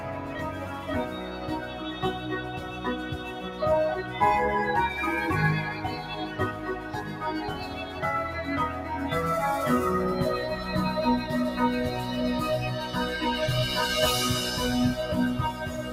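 From the opening and across the whole clip, a noise suppressor built for speech has been left running on sound it was not designed for. It mistakes sustained tones and decaying tails for background noise and pulls them down, while sharp onsets slip through. Gain swings of around 10 dB result, so the sound pumps and thins. On a waveform the envelope breathes unevenly. A spectrogram shows attacks intact but sustained bands fading early, with tails chopped rather than decaying smoothly.

Specific stretches show the sound cut by the noise suppressor: 0.00 to 0.88 s, 1.05 to 2.03 s, 2.19 to 3.61 s, 5.75 to 7.21 s, 7.61 to 8.00 s, 8.70 to 8.90 s, and 15.53 s to the end. In each, the suppressor judged the held or fading material as noise and ducked it, by about 5 dB at the deepest (about 4 dB in the last). These stretches sound briefly hollowed and quieter. They appear as dips in the waveform envelope and dimmed, shortened horizontal bands on a spectrogram.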